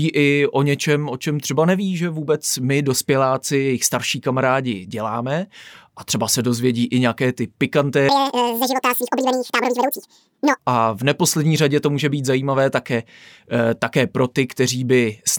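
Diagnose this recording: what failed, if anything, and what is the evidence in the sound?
From 8.09 s to 10.59 s the speech suddenly races at twice its normal speed and jumps about an octave higher, then returns to normal just before "a v neposlední řadě". This is audio read two samples at a time (double speed), a sample-format conversion fault. The reader treated each pair of samples as one frame, as if the stream had two channels or wider samples. Every frame therefore consumed two samples of mono audio, halving the duration and doubling the pitch. The effective decimation folds any strong content above a quarter of the sample rate back down as aliasing.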